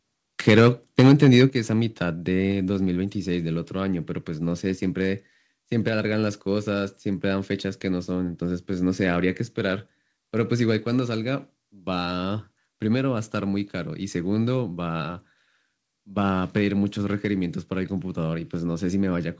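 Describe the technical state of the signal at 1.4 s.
At 1.4 s the signal is clipped. This is likely microphone overload, running from 0.98 to 1.45 s. The input drives about 5 dB past the converter's ceiling. The tops of the loudest peaks are sliced flat, affecting roughly 4 percent of samples in that stretch. Flattened waveforms add harmonics that were never in the speech. The result is a harsh, crackly edge on the strongest syllables.

Right after, at 1.5 s, the level drops abruptly by about 7 dB. This sounds like a microphone volume stepped down, likely the call software reacting to the distortion. Speech and background fall together in one step rather than fading. Through the G.722 call path, nothing is heard above 8 kHz. The clipping distortion therefore stays within that band.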